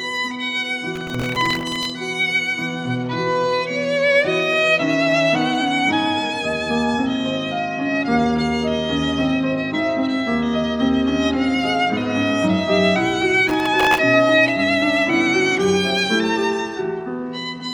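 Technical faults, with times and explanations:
0.96 to 1.90 s, processor overload crackle: a gritty tearing rides on the sound for about a second. The processor keeps missing deadlines on very short buffers, around a millisecond and a half each, and each miss replays a scrap of old audio with hard edges. A few dozen in a row blur into crackle.
13.49 to 13.98 s, processor overload crackle: the same grit returns for half a second, with fewer misses, then clears as the load passes.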